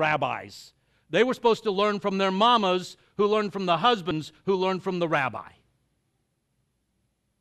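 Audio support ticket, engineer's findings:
Brief smeared blip at 4.10 s, speech jumping forward with no hard click. Compressed frames skipped: about two whole frames (about 50 ms of audio) missing or rejected as damaged by the decoder. The jump fits a frame length near 26 ms. Overlap between neighbouring frames blurs the join. Check file integrity and the decoder's error handling.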